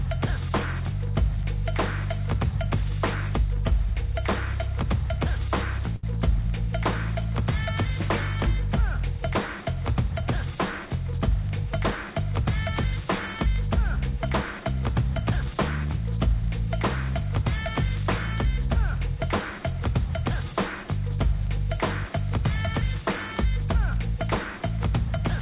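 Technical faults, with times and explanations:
5.96 to 6.06 s, short stall from a late packet: One packet was late, and the jitter buffer ran dry. The receiver held the last sound for about 72 ms to cover the gap. When the packet came, playback resumed from the same point. No audio is lost. The held sound stretches slightly and carries a slight buzz or dip. Everything after it plays 72 ms later than before. The band-limited call sound, with nothing above 4 kHz, fits a narrowband telephone codec.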